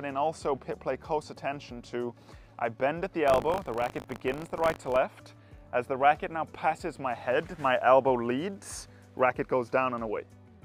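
From 3.26 to 4.97 s, the writer and reader of the playback ring buffer slip out of step, producing buffer tearing: a small slice of each 20 ms period, a few percent, holds audio from about 40 ms earlier, hard-joined on both sides, heard as a 50 Hz robotic rattle over the sound.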